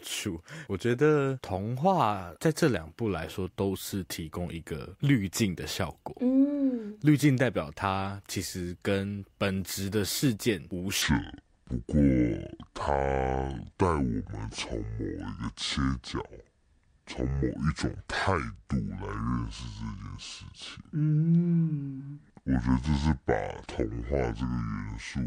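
From 11.02 s to the end, there's a section at the wrong speed: the speech drops to 0.618 times normal speed, so it turns slow and dragging, with pitch falling roughly seven semitones. The likely cause is that part being played against the wrong clock.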